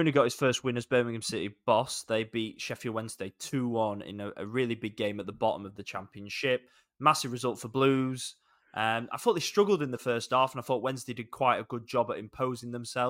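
Speech recording with no audible technical fault anywhere in the signal.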